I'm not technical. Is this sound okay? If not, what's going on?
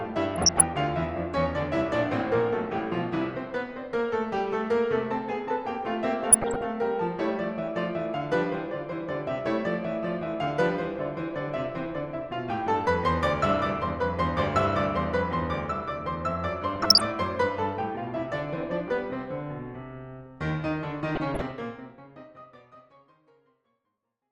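No. DAB burbling at 0.34–0.63 s, 6.26–6.65 s, 16.76–17.09 s and 21.15–21.51 s: weak digital radio reception let errors slip through, putting brief blips of noise into slices of the music. The gentle fade-out near the end is deliberate.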